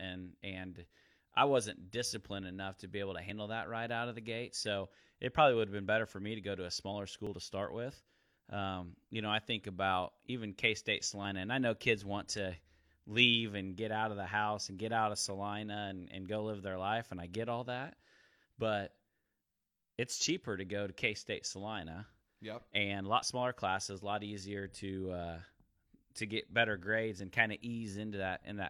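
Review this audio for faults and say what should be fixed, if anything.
There's overlap between stream segments: small clicks or skips at 3.3, 7.27, 11.25, 15.26 and 23.23 s, following the 4-second segment grid. About 16 to 42 ms of sound goes missing at each, like the jump just before "and and go live". Fix it by making segment timestamps line up exactly at each boundary, so the player doesn't trim sound that isn't duplicated.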